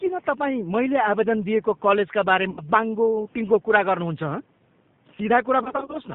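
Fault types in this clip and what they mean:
G.729 codec: an 8 kbit/s VoIP coder rebuilding speech from a filter and pulses, so everything above 4 kHz is gone and the speech sounds plainly rough and synthetic.
VoIP packet loss concealed by the speech codec: the decoder guesses over missing packets, giving fading buzzy patches, first right after "आवेदन दिएको कलेजका बारे", then scattered over 0.3 s near the end.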